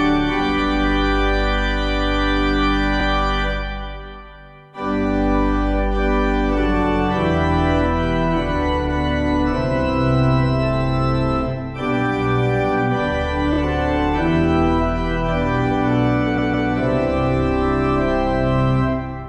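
Repeated frames: compressed blocks were resent, so the audio stutters and lengthens, briefly at 2.99 s and 13.52 s, then a 157 ms stretch plays twice more at 16.37 s.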